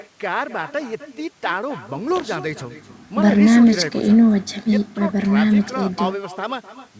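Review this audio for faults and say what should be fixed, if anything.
Every phrase is shadowed throughout by a thinner copy about a third of a second later, about 14 dB down. This is echo with no canceller: the far-end loudspeaker's output is picked up by its microphone and sent back unremoved. Turning on acoustic echo cancellation at the far end, or having that listener wear a headset, would prevent it.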